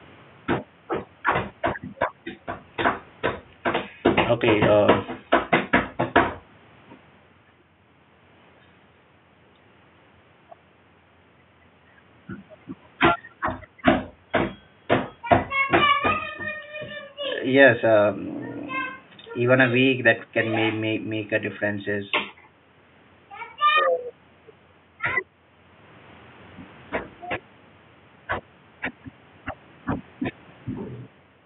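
A speech recording with no technical faults to report. Faint background noise from the room can be heard, sitting about 31 dB below the speech.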